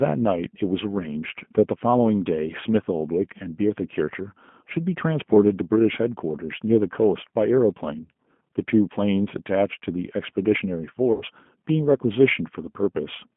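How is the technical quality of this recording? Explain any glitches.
The recording is clearly degraded. It carries codec damage from start to finish and a short dropout near the end.

The G.729 codec runs throughout. Audio sits in a narrow telephone band, about 150 Hz to 3.4 kHz, with nothing above that. The codec rebuilds speech at 8 kbit/s from a vocal tract filter, a pitch predictor and a few pulses per frame. That coarse model is plainly audible. Speech stays intelligible but sounds rough and synthetic.

VoIP packet loss concealed by the speech codec occurs from 11.12 to 11.23 s. About 90 ms of audio went missing, which fits three lost 30 ms packets. The decoder filled the gap by repeating its last pitch and filter settings while turning the gain down. The speech smears into a buzzy tone or coloured noise that fades. It sounds weak or distorted for tens of milliseconds or more after real audio resumes.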